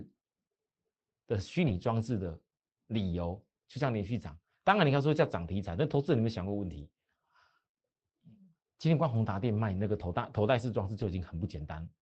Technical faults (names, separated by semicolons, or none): lost packet rebuilt from error correction